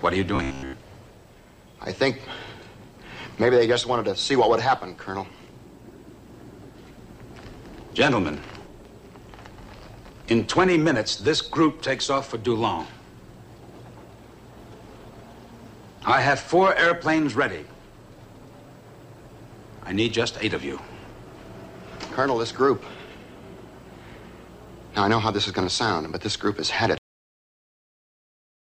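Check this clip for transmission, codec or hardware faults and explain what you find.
Two faults are audible, one near the start and one at the end.

Robotic sound from repeated short buffers, 0.36 to 0.73 s: for most of this stretch the audio is replaced by rapid repeats of one tiny slice, likely because new data arrived too slowly and the playback side looped what it already held. Each repeat lasts about 15 ms, which imposes a fixed 66.7 Hz pitch. The result is a rigid, metallic buzz that only loosely tracks the underlying sound while the real material between repeats is lost.

Cut-off end, at 26.98 s: the audio stops abruptly partway through a sound and falls straight to digital silence for the remaining time. There is no natural decay or tail. The final stretch of audio was never written out or played, so the recording ends on an unfinished moment rather than fading or resolving.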